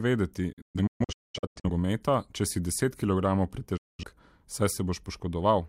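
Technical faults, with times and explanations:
0.53–1.70 s, digital broadcast dropout: the receiver kept losing valid frames and muted each time, so the speech breaks into several short silent holes totalling about 0.73 s across 1.1 s. The longest hole is 0.21 s, each edged by an 8 ms fade, and the missing speech never returns.
3.77–4.03 s, digital broadcast dropout: a short run of failed frames muted the output once more, cutting 0.21 s of silence into the speech with 8 ms fades on either side. The sound skips across the gap rather than resuming where it stopped.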